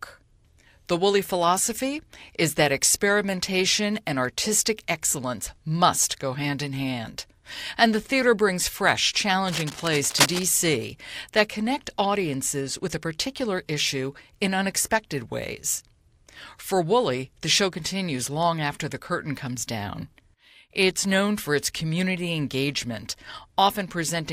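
From 9.47 to 10.43 s, right after "the theater brings fresh", cable scratch noise rasps over the speech only slightly below its level, likely a worn lead or connector shifting. A spectrogram shows dense, ragged broadband streaks; the waveform shows jagged, irregular spikes.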